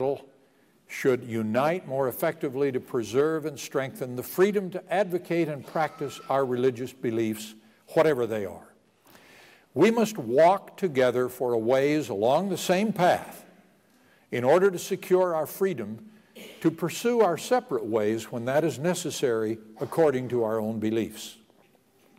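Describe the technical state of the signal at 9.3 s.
At 9.3 s the signal is intact, with no audible fault at that moment.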